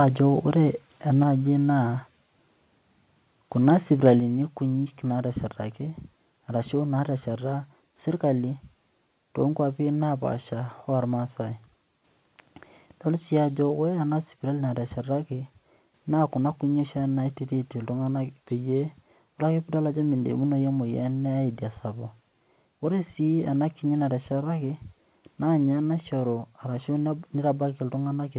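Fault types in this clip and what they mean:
Microphone volume stepped down: the speech drops abruptly by about 3 dB at 1.23 s, then about 5 dB more at 4.2 s, likely the call software cutting the input level.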